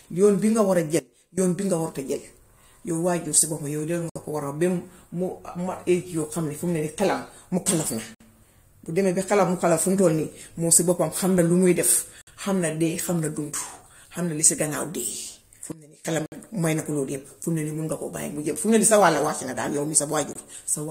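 At 0.99 s the speech and the background noise drop together by about 18 dB in a sudden gain jump, then snap back at 1.38 s, just before "bii nga warta jël". There's no fade, so it's likely a gain step applied without a ramp.

Then come the gaps between stream segments: hard-edged silent holes at 4.10, 8.15 (right after "xelem mukalaf na") and 12.21 s, each roughly 56–61 ms, spaced 4 s apart. That spacing points to segment timestamps leaving small holes the player pads with silence, though no audio is actually lost.

From 15.72 to 16.05 s there's a second sudden gain jump, about 20 dB down with both edges abrupt, likely the same unramped gain change.

The segment gaps continue at 16.26 s (about 60 ms, just before "may na") and at 20.33 s, where the hole is shorter at about 23 ms.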